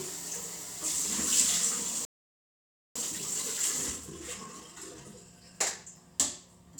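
At 2.05 s the sound cuts out mid-flow and stays silent for about 0.9 s, until 2.96 s. This is a playback stall. The player likely ran short of data or had its thread blocked. Output then resumes.

From 2.96 s to 5.96 s comes time-compressed catch-up. The player trims its backlog by cutting out small slices and cross-fading the joins. The sound runs about 1.15 times fast, hurried but at normal pitch.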